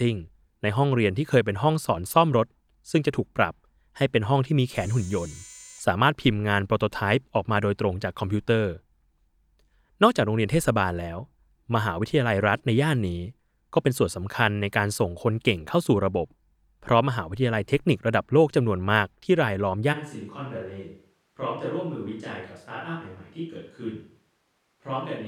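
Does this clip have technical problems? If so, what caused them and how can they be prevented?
Yes. At 19.95 s the close microphone likely dropped out, leaving a switch to a distant microphone: the speech turns roomy and thin, roughly 10 dB quieter, with audible background noise until the end. Monitoring the close microphone during recording, and securing its cable and battery, would catch or prevent the dropout.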